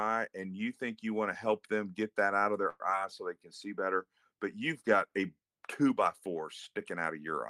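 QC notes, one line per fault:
2.69–2.82 s, call audio freeze: after "get that out of", the last sound stretches into a fading buzz or hiss for 106 ms, likely from delayed packets. A smeared, stationary band appears on the spectrogram, then speech resumes late with nothing lost.
2.90–2.92 s, short concealed packet loss: just before "so they", 20 ms drops out with almost no fill. The audio jumps ahead slightly.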